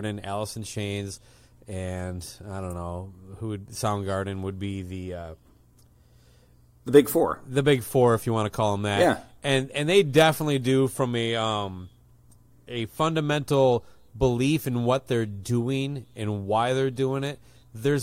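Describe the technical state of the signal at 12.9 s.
Around 12.9 s the speech signal runs intact, with no fault to be heard at that point.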